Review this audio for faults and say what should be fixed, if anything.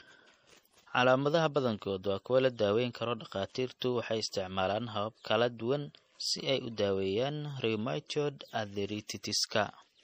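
Low-bitrate audio saved at a high bitrate, throughout the speech. Nothing is present above about 15.2 kHz, and the band below carries the smeared, swirly coding artefacts of a starved MP3 encode. The file was likely first compressed at a low MP3 bitrate, around 40 kbit/s, and then re-encoded at a generous one, around 192 kbit/s. The second pass adds size but cannot recover the detail or the highest frequencies the first encode discarded. To prevent it, return to the original uncompressed or high-bitrate source and encode it once at the target bitrate, rather than re-encoding an already compressed copy.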